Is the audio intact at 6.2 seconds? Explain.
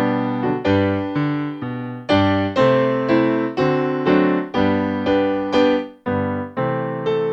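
Yes, at 6.2 seconds the audio plays through cleanly, with no dropout, click, distortion or other fault at that moment.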